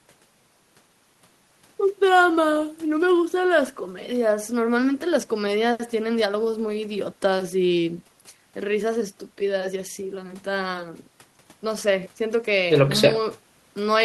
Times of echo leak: none

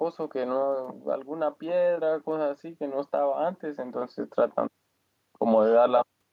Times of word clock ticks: none

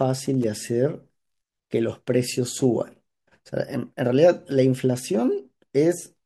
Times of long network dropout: none

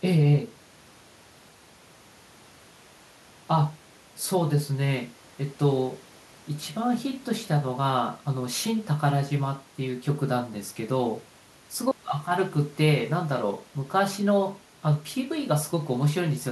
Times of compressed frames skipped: none

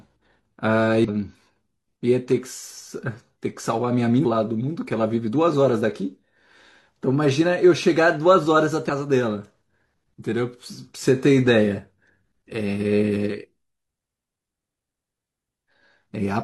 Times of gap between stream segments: none

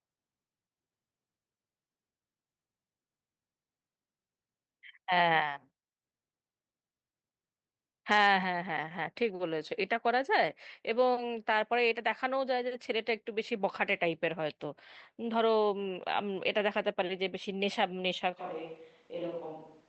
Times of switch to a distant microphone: 18.40-19.89

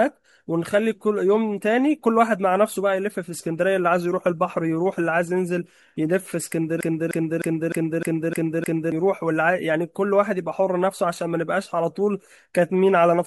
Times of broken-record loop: 6.81-8.92

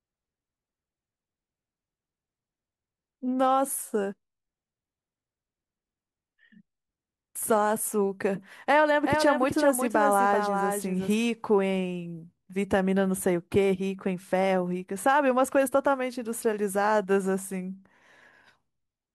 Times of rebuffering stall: none

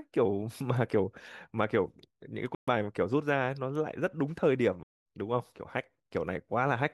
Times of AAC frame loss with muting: 2.54-2.68, 4.83-4.98

